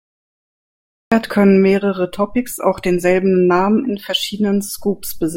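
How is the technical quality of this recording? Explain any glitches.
The recording has one clear technical fault, at the very beginning.

Cut-off start, 0 to 1.12 s: capture began late, so the first 1.12 s is digital silence and the speech enters abruptly at 1.12 s, already mid-sound, just before "können mehrere". There is no natural onset or fade-in, only a hard jump from nothing into ongoing speech.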